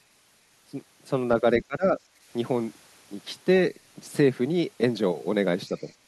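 A speech recording whose level collapses between 1.6 and 1.99 s, falling by up to roughly 20 dB in patches totalling about a fifth of a second. The waveform shows shrunken segments there. This is likely speech suppressed in double talk, an echo canceller ducking the talker while the far side spoke.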